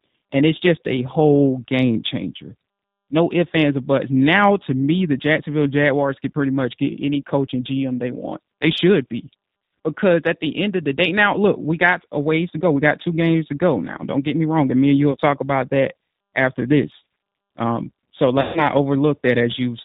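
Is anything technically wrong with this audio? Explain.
Yes. Throughout, the G.729 codec's damage is plainly audible: speech rebuilt from a vocal tract filter and sparse pulses sounds rough and synthetic, consistent with 8 kbit/s coding. A spectrogram shows nothing above 4 kHz.

VoIP packet loss concealed by the speech codec occurs twice. At 15.12 to 15.16 s, between "me and you will" and "talk about that after", about 20 ms is lost. At 18.41 to 18.69 s, about 140 ms is lost. Each time the decoder stretches its last pitch and filter into a buzzy tone or coloured noise that fades, which shows as a decaying waveform envelope.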